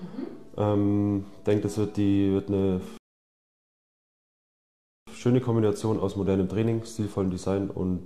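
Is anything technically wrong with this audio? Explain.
Yes. From 2.97 to 5.07 s there's a rebuffering stall: the player ran dry, went silent for about 2.1 s, then picked up exactly where it stopped.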